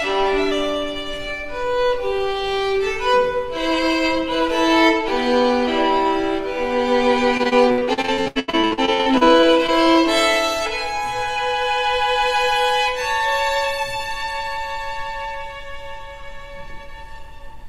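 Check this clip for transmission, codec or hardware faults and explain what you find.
There is one transmission fault: repeated packet loss (robotic sound) from 7.37 to 9.70 s. Packets went missing over and over, and each hole was patched by extending the last sound before the next soon followed. About two dozen gaps, the longest 84 ms, make the sound choppy, with pieces missing.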